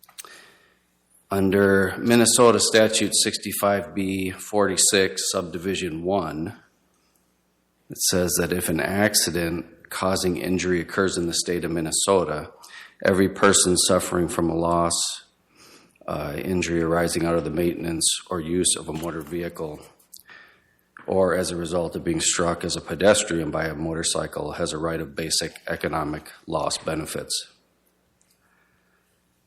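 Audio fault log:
No faults heard anywhere in this recording.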